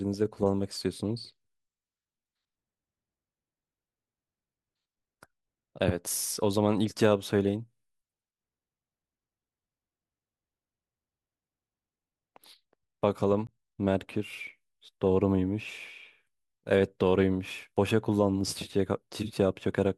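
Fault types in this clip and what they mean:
Block of digital silence: At 13.47 s the speech drops to silence for 15 ms, then resumes. There is no fade either way. At this length the gap is heard as a tick or dip rather than as silence.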